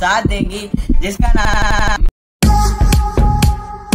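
From 1.45 to 1.96 s there is a system hang loop. The system froze while the hardware kept replaying its ring buffer. One 85.33 ms slice repeats six times, a machine-gun stutter at 11.7 Hz. That fits a 4096-sample buffer. About half a second of audio is lost.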